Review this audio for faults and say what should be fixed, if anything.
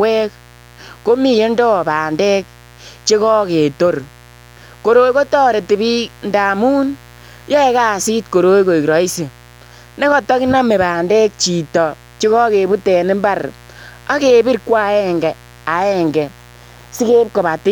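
A mains buzz runs through the whole recording, from start to finish. It sits roughly 25 dB below the speech. The buzz is steady and raspy rather than a smooth hum. It is built on 60 Hz. Sharp switching spikes arrive twice per mains cycle. This spreads harmonics well up into the kilohertz range. A dimmer, a rectifier or a missing cable shield would let such spikes in. To prevent it, keep dimmers and switching supplies off the recording circuit and use shielded, properly grounded cables.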